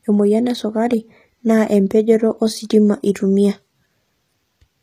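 HE-AAC compression runs throughout the speech, from the first second to the last. The codec damage is plainly audible, and the sound is most likely due to HE-AAC coding at a low rate, which fits a bitrate of around 24 kbps. Only the lower spectrum is coded directly, and the treble is rebuilt by copying lower bands upward. Those synthetic harmonics fail to line up, so s sounds turn gritty and lispy. Nothing is present above 14.9 kHz.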